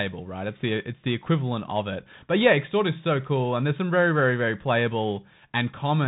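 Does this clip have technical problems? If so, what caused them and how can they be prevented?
Yes. Throughout the speech, the sound is boxy and muffled, with nothing above about 3.8 kHz, scratchy s sounds, a granular hiss underneath and distortion on loud bright sounds. This is the Bluetooth CVSD headset codec, which fits a 64 kbit/s link. It codes each sample as a single up-or-down bit with an adapting step, so fast loud changes outrun the step. To prevent it, record on a wired microphone or switch the headset to a wideband or high-quality audio profile.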